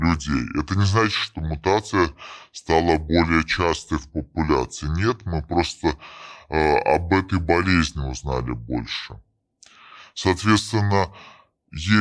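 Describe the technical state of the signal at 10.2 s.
At 10.2 s the speech sounds low and dragging, pitched down about 6.5 semitones and running at 0.689 of its proper speed, with pitch and tempo lowered together. This is a wrong sample rate fault, present from start to end of the clip rather than at this moment alone. The samples are played back slower than they were captured, with no rate conversion, and the ratio fits material recorded at 32 kHz being played at 22 kHz.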